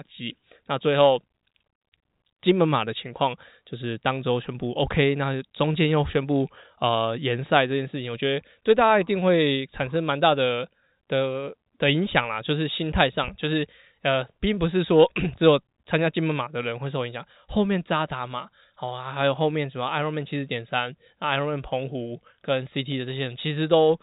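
Nothing here goes wrong; the speech simply comes across with the narrow sound of an ordinary G.711 phone line, with nothing reaching above about 3.8 kHz.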